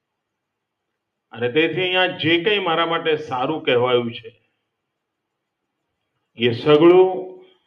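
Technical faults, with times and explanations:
4.25 to 4.51 s, sound cut by the noise suppressor: the suppressor mistook this sound for noise and pulled it down, by about 21 dB at its deepest.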